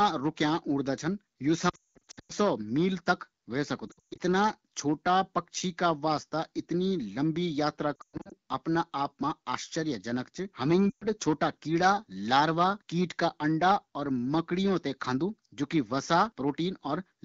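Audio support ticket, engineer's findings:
Lost AMR speech frames at 1.69–2.32 s, 3.87–4.21 s (right after "तक ह्वे"), 7.96–8.33 s and 10.90–11.06 s. Symptom: smeared, warbling sound sliding to silence; longest gap about 200 ms in the first event. Mechanism: corrupted frames concealed by repeating pitch/vocal-tract parameters with decaying gain. Spectrogram: harmonics stretched flat, then fading bands and gaps. Waveform: envelope droops to near silence, weak restart. Wideband bandwidth audible around the dropouts, consistent with AMR-WB near 12.65 kbit/s.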